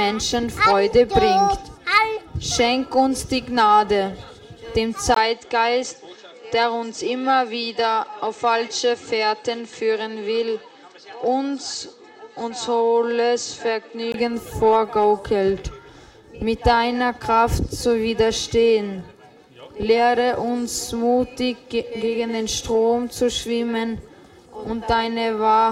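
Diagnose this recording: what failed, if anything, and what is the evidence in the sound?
From 5.14 to 14.14 s the sound goes dull and a few dB quieter, nothing above 8.4 kHz, with a new noise floor well down and a 20 ms gap at 5.14 s. That's likely the input switched to a poorer device at the driver level, then back.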